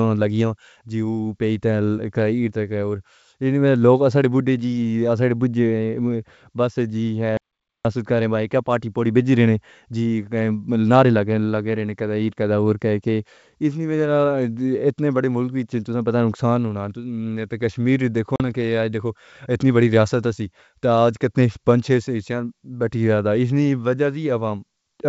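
At 7.37 s the input was likely lost, through a disconnected device or an unintended mute, while the recorder kept writing silence. The speech cuts off abruptly into an audio dropout to silence lasting about 0.48 s, with no room tone, and resumes mid-flow at 7.85 s.

At 18.36 s the call suffered ADPCM packet loss: a few packets, about 40 ms of audio, were dropped and filled with silence. The decoder's predictor and step size drifted from the sender's, so after the hard-edged gap the speech returns at 18.41 s with brief roughness until the G.722 decoder resynchronises.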